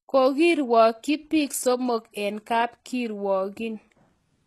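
Throughout the speech, s sounds come out gritty and lispy, with a metallic sheen on the treble, the likely result of HE-AAC compression at a rate that fits about 16 kbps. On a spectrogram, the upper bands look like smeared copies of lower ones, and nothing appears above 12.3 kHz.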